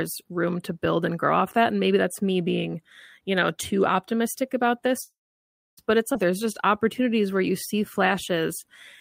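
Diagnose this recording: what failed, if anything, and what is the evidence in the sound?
Network stage, call audio freeze: after "too optimistic about this", sound stops at 5.01 s, leaving a 0.78 s gap, mostly silent for 0.63 s, before resuming at 5.79 s. This was likely packets stalling and the jitter buffer running empty.

Network/jitter buffer, skip ahead: at 6.13–6.16 s playback jumps forward, dropping around 0.4 s of audio, with the two sides joined almost directly.

Jitter buffer slow-down: from 6.31 to 8.69 s, repeated pitch periods stretch the audio to 94% speed, adding 145 ms at unchanged pitch to rebuild the reserve.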